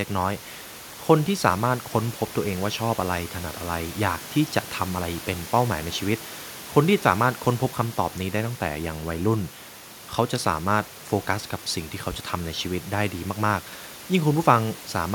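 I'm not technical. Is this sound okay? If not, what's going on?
Yes, nothing has gone wrong with this sound. The faint background noise of the room sits well below the speech, which is simply part of where it was recorded.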